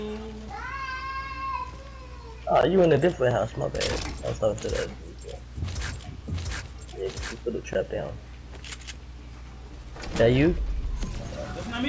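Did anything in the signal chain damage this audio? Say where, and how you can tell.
No, nothing in the signal chain audibly damaged this audio.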